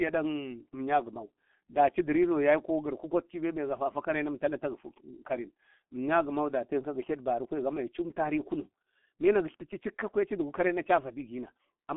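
Speech, heavily damaged throughout by the G.723.1 codec. Nothing passes above 3.5 kHz, so it sounds muffled. Hoarse tone and blurred consonants fit a bitrate near 6.3 kbit/s.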